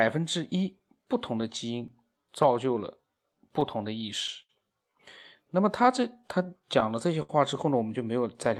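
Running through the whole recording is clock drift between sender and receiver: the sending side's clock runs roughly 5 percent slow, so the receiver's jitter buffer keeps draining. Unlike a single network hiccup, the timing unease never settles, and it surfaces as small, unevenly spaced disturbances from start to finish.

From 0.56 s to 6.93 s come repeated timing corrections. The receiver pads the stream by repeating short slices, playing the speech at about 98 percent speed and adding something like 150 ms overall. Because every edit lengthens rather than shortens, the speech sounds slightly slow and faintly uneven in tempo, not broken.

Overlapping that, between 0.78 s and 2.45 s, are scattered short gaps: around seven late packets, each concealed by extending the last sound for about 10 ms or less, roughly 40 ms in all. These register as isolated tiny ticks or smears, far briefer than the later stalls, and nothing is lost.

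At 4.42 s to 4.51 s a short stall from a late packet holds one sound for 68 ms while the buffer sits empty, then speech resumes exactly where it stopped. It is a single held sound with a slight buzz or dip, unlike the scattered ticks.

Finally, from 5.83 s to 7.31 s, repeated stalls (stutter) set in: six separate buffer underruns, totalling 116 ms, the longest 67 ms, stretch sounds again and again. Where the earlier stall was a lone pause, this stretch drags and stutters in quick succession.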